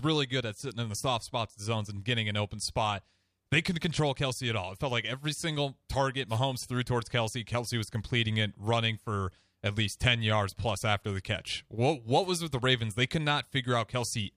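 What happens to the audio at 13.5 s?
Nothing goes wrong at 13.5 s; the audio carries straight through that moment with no dropout, click, distortion or other fault.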